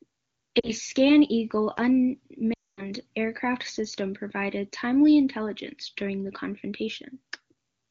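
Speech over wideband AMR (HD Voice), clean at what sounds like a high rate, with lost AMR speech frames twice. The decoder reuses old pitch and tract settings with falling gain: a brief dropout at 0.59 to 0.70 s, then a longer drop to near silence from 2.54 to 2.90 s.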